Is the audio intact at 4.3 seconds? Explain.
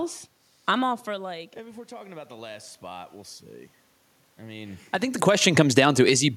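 Yes, the audio is intact at 4.3 seconds, with no dropout, distortion or other fault in the signal at that point.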